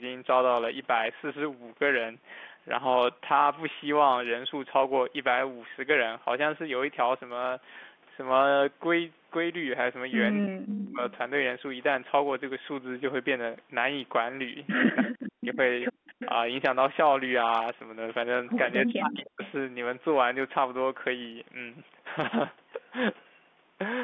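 Speech suppressed in double talk, likely from an echo canceller that could not separate near-end speech from loudspeaker echo, ducks the sound by about 40 dB at 10.44–11.04, 15.01–15.58, 15.95–16.14 and 18.84–19.42 s. An echo leak, likely from loudspeaker pickup that escaped cancellation, returns a delayed copy about 307 ms late at 10.76–11.12, 15.28–15.57, 16.19–16.29 and 18.85–19.51 s. That copy is somewhat quieter than the speech at first and nearly as loud in the last one.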